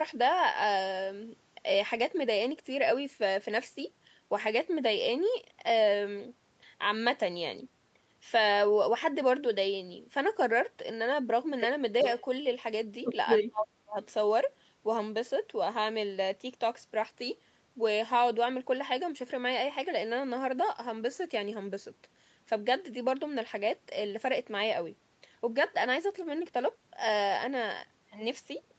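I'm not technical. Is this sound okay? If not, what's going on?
No. Around 12.02 to 12.22 seconds there is an echo leak: someone on the call was likely using a loudspeaker, and their echo canceller let some of it slip back. You hear a faint copy of the voice arriving about 0.38 seconds late.

From 13.39 to 13.97 seconds comes speech suppressed in double talk: both sides likely spoke at once, and the echo canceller couldn't tell the talker from the echo, so it turned both down. The voice drops sharply, almost vanishing for about half a second.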